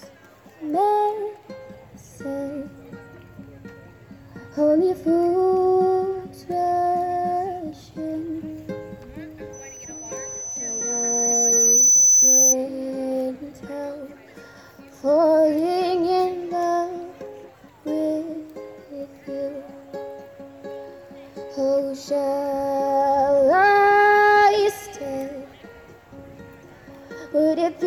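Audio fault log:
9.53–12.56 s, loudspeaker feedback squeal: a single 6 kHz tone swells over roughly two seconds and settles about 10 dB above the sound. The microphone is hearing its own loudspeaker, and at this frequency the loop gain passes unity, so the tone keeps reinforcing itself until the amplifier limits it or the loop is broken.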